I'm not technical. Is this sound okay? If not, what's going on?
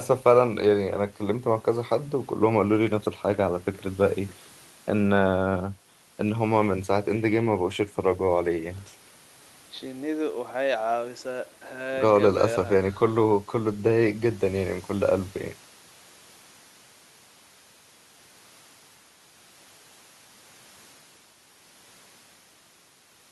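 Yes, this one's fine: there's nothing wrong with it that you need to worry about.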